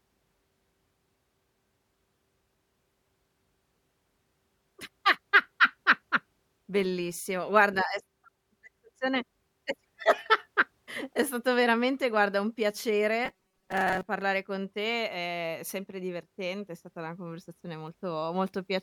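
From 13.26 to 14.08 s the speech turns into a rigid, metallic buzz pitched at 188 Hz that still loosely tracks the syllables, ending just before "con te è sempre". This is robotic sound from repeated short buffers, likely caused by audio arriving too slowly: the playback fills gaps by looping a fragment of about 5.3 ms, and roughly half of this stretch is such repeats rather than real audio.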